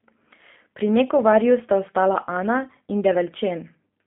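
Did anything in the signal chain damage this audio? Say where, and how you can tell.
Yes, G.729 codec damage at the codec stage, throughout. The sound is plainly rough and synthetic, with nothing above 3.6 kHz. That fits an 8 kbit/s G.729A stream rebuilding the speech from pulses.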